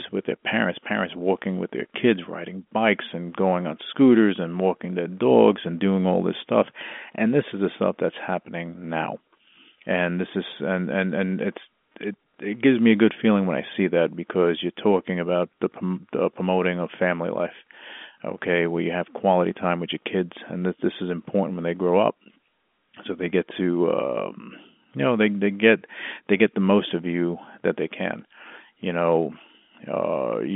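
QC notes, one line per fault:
The speech is carried in the narrow band of an ordinary fixed-line telephone channel, with nothing heard below about 200 Hz or above about 3.4 kHz, and faint quantisation noise that rises and falls with the signal level, which fits G.711 telephone coding in its A-law form at 64 kbps.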